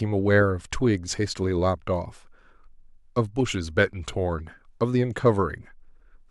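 No technical faults are audible anywhere in the recording.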